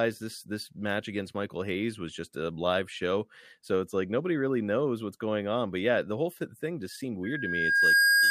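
At 7.23 s, right after "whole thing just seemed", a loudspeaker feedback squeal starts and runs to the end of the clip. A single 1.6 kHz tone swells from nothing to about 10 dB above the speech in under a second. This happens because the microphone is hearing its own loudspeaker, and at that one frequency the loop gain passes unity. That self-reinforcing growth is what separates it from a steady interfering whistle or tone, which would not ramp up like this.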